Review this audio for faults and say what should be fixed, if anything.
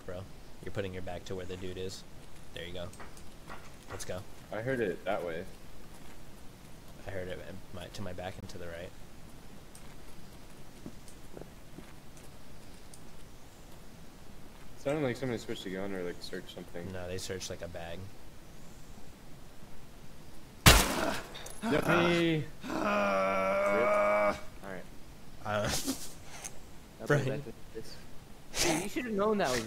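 At 8.40 to 8.43 s the sound drops to about 22 ms of silence, then resumes. This is likely a Bluetooth stall. Interference delayed packets, so the receiver's buffer emptied and playback paused briefly. Reduce wireless interference or shorten the link distance during capture.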